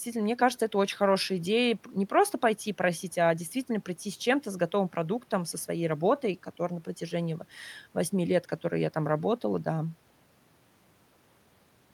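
Nothing technically faulty is audible anywhere in the recording.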